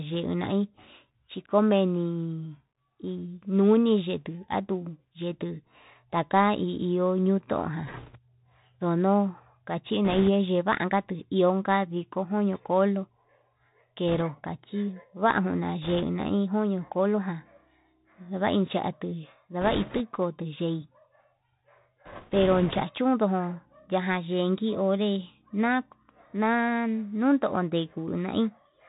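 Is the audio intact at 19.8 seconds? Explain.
No. From 19.61 to 20.01 s the speech is covered by a rushing, crackly noise with no sharp clicks. These are bit errors on a Bluetooth voice link: a few percent of the one-bit samples are flipped, and because each carries equal small weight, errors smear into noise rather than pops.

Underneath, the Bluetooth CVSD headset codec is plainly audible. The speech is narrowband, with nothing above 4 kHz, scratchy s sounds and a granular hiss. The coder sends only up-or-down steps with adaptive size, which fits a 64 kbps headset link.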